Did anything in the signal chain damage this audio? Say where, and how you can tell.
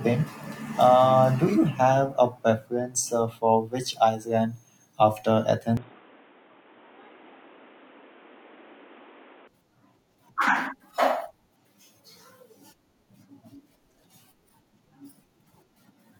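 Yes. From 5.77 to 9.48 s the speech turns boxy, with nothing above 3.8 kHz and faint new background noise. This is likely an input switched to a poorer device, at the driver stage.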